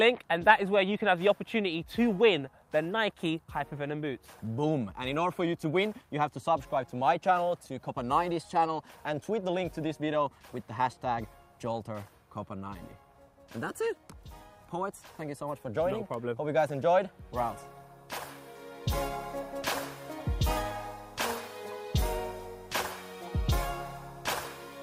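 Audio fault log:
No technical faults detected.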